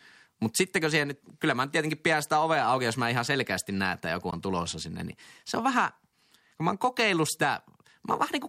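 At 4.31 s, a Bluetooth dropout: data likely reached the headphones too late and was discarded, cutting the speech to a sharp-edged 14.5 ms silence that fits one lost packet.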